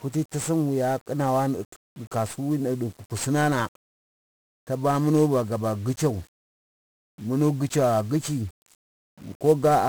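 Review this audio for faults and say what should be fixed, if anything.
The speech carries 1-bit DFPWM compression for its whole length, and the damage is heavy. Each sample is reduced to a single up-or-down decision that nudges an adaptive level toward the waveform, so the signal is only ever approximated by a staircase that keeps overshooting. That tracking error becomes loud broadband quantisation noise: the speech sounds fuzzy and crackly, and the upper frequencies disappear under a layer of hiss. The density of the noise fits a stream of around 48 kbps. To prevent it, keep the master in a multi-bit format such as 16-bit PCM or a modern perceptual codec, and reserve DFPWM for playback targets that require it.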